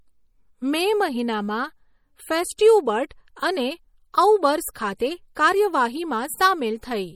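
Speech runs the whole clip through what is likely MP3 compression at a bitrate around 48 kbps, which leaves plainly audible watery, swirling artefacts and nothing above 20.9 kHz. At 4.74 s, a transform block smears quantisation noise ahead of a sharp attack, so a brief pre-echo hiss of about 17 ms precedes it and softens the onset.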